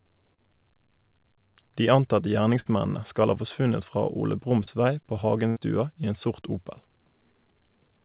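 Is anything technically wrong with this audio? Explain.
Yes. The speech loses packets four times on what sounds like a narrowband telephone-codec call, with nothing above 4 kHz. At 0.34 s and 4.64 s, short concealed packet loss drops about 30 ms each time. The receiver extends the preceding sound to cover it, leaving a brief smear or wobble. At 2.60 s and 5.48 s, a burst of packet loss removes about 60 ms and 80 ms. The concealment fades into a held buzz or hiss, and the speech resumes with that stretch missing.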